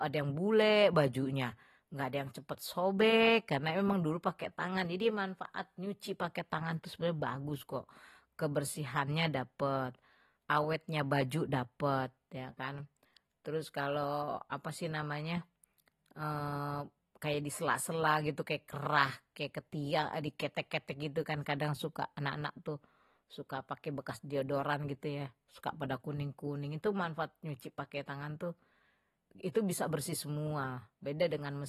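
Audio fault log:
Throughout: AAC compression. The speech sounds dull and smeared, with nothing above about 13.8 kHz, and sibilants and held vowels carry a plainly audible fizzy, warbling texture. This is likely low-bitrate AAC-LC coding, consistent with a rate around 37 kbps: the encoder lowers its cut-off and quantises each frame's spectrum coarsely against a hearing model, so detail in the upper bands is thinned out or replaced, leaving a swirling residue on sustained sounds.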